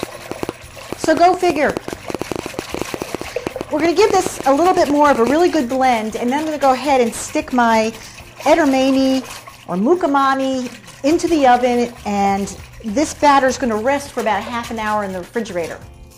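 From 0.03 to 5.31 s, a train of clicks, roughly forty irregular pops at about 7.8 per second and likely from interference, appears as thin vertical spikes towering over the waveform.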